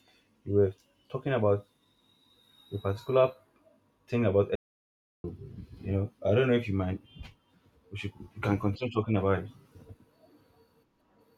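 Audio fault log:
4.55–5.24 s, audio dropout to silence: the input path was likely lost, through a disconnected device, failed link or stray mute, while silence kept being written. After "thing about" the speech cuts to complete silence, with no room tone, for about 0.69 s before resuming at "you know I don't".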